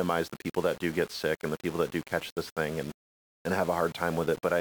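From start to finish the speech has a grainy, gritty edge that tracks the voice itself, roughest on the quiet tails, which sputter or drop out instead of fading smoothly. That's low bit depth without dither: the samples were likely rounded to very few levels, which fits about 6 bits, with no dither to break up the error. The error sits only around 20 dB below the signal, so it's hard to miss.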